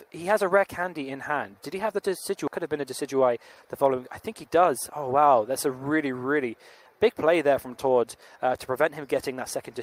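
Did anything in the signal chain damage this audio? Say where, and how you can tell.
Yes. At the network and jitter buffer stage, about 0.7 s of audio was discarded while later packets were already queued, causing a skip ahead at 2.47 to 2.49 s. Playback jumps straight forward with no fill, so the sound on either side is butted together abruptly.

Shortly after, the jitter buffer speed-up from 3.14 to 3.91 s shows the receiver draining an overfull buffer. It trimmed repeated pitch-period slices, around 70 ms in total, so the sound runs about 107% fast at unchanged pitch and feels rushed.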